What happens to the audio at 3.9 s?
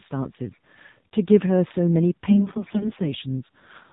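At 3.9 s the speech is still going through the AMR narrowband mobile codec, as it has been the whole way. Nothing above 4 kHz gets through, and the voice is rebuilt from a vocal-tract model and sparse pulses, so it sounds plainly buzzy and synthetic, which fits a low rate around 7.4 kbps.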